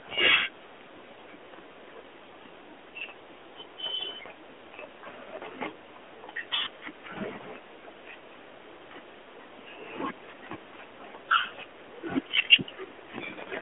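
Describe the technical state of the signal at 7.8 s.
At 7.8 s the audio is intact, with no fault at that moment, only the narrowband band-limiting of the AMR mobile codec path, which passes nothing above about 3.7 kHz.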